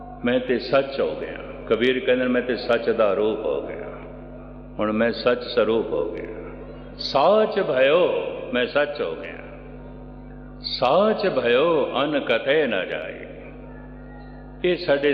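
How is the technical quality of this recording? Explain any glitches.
The technical quality of this recording is good, with no glitches to explain.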